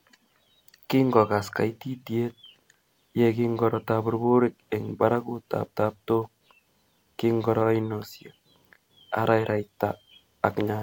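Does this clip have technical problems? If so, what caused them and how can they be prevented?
No technical faults are audible.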